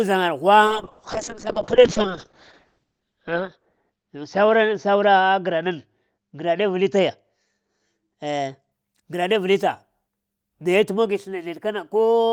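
From 0.66 to 8.77 s a call bitrate drop starves the encoder, sinking from 32 to 6 kbps and narrowing bandwidth from 20 kHz to 8 kHz, so speech turns coarse, watery and muffled.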